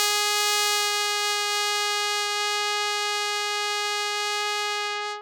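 Nothing in this music clip stood out on listening.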